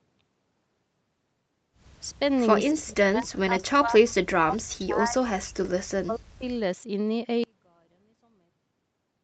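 It's a speech recording that came through a call, with the top end stopping around 8 kHz as you'd expect from Opus on that path, and it has a few real problems. From 2.72 to 4.04 s, then 4.26 to 5.2 s, 5.36 to 5.74 s and 5.9 to 6.45 s, the speech keeps dipping hard, by roughly 40 dB at its deepest. That's likely speech suppressed in double talk: the far side was talking at the same time, the echo canceller couldn't tell the local voice from loudspeaker echo, and it clamped down on everything. Between 4.09 and 4.13 s there's a brief ghost of the voice arriving 232 ms late, roughly 30 dB under the main speech. That's likely an echo leak, where the other end's canceller let a scrap of its loudspeaker pickup slip back into the call. From 7.44 s to the end the speech nearly disappears, dropping about 36 dB, and only a faint remainder is left. That points to one channel inverted: one stereo side has flipped polarity, so when the two are summed to mono, the centred voice they share cancels itself out.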